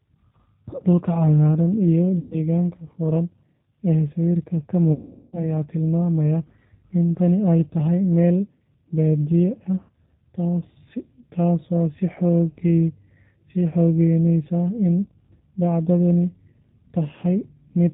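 Speech, and the whole thing runs through the G.729 codec at 8 kbit/s, with plainly audible codec damage. Everything above 4 kHz is gone, so it sounds narrow and phone-like, and because the decoder rebuilds each 10 ms frame from a vocal tract filter, a pitch estimate and a handful of pulses, there's a rough, slightly synthetic edge to it. On top of that there are four dropouts covered by VoIP packet loss concealment from the speech codec: 2.19 to 2.38 s (120 ms lost), 4.93 to 5.42 s (400 ms lost), 6.75 to 6.86 s and 9.81 to 9.91 s (80 ms each). In each gap the decoder keeps extrapolating from its last pitch and filter while turning the gain down, so you get a stretched, buzzy or noisy smear that fades. The one at 4.93 s is the longest. The gap lengths fit 20 ms packets. Since each frame leans on the one before, the sound stays weak and a bit mangled for a short stretch after each gap ends.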